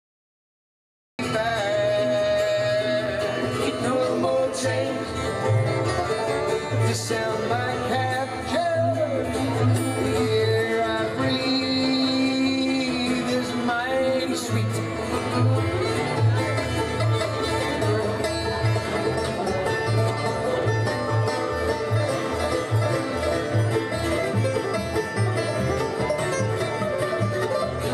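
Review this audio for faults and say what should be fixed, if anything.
Cut-off start: capture began late, leaving digital silence until 1.19 s, where the sound jumps in abruptly mid-event with no natural attack or fade-in. To prevent this, arm and start recording before the source begins, or keep a short pre-roll buffer so the opening is captured intact.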